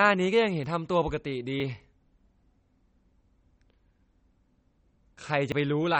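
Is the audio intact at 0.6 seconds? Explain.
No. At 0.64 s there is an abrupt jump in the speech and no gap of silence. About 40 ms of audio is missing, likely a dropped buffer (overrun), where the program failed to read samples before the hardware overwrote them.

The whole clip, 0.6 s included, carries MP3 compression damage: the sound is watery and swirly, with smeared attacks. This likely comes from an encoder starved of bits, which fits a low bitrate around 32 kbps.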